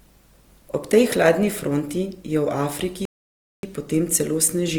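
A speech recording whose encoding was likely Opus compression in its music mode, starved of bits at a rate that fits roughly 24 kbps, so although the bandwidth stays fullband, the voice comes out plainly rough, grainy and noisy in texture rather than swirly. Later the player likely starved of data or was blocked, causing a playback stall from 3.05 to 3.63 s: the sound cuts off mid-flow and stays silent for about 0.58 s before resuming.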